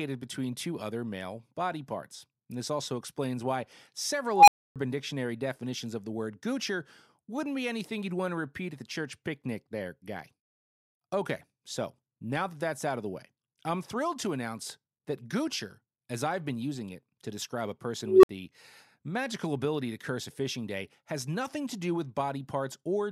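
At 4.33 s and again at 18.03 s, just after "it to describe a", an unstable filter runs away: bad coefficients make a tone of roughly 700 Hz, then roughly 400 Hz, swell over 144 ms and 201 ms to clipping, then drop into silences of 280 ms and 60 ms. On a spectrogram it shows as a brightening horizontal line; the waveform balloons until it clips, then goes flat.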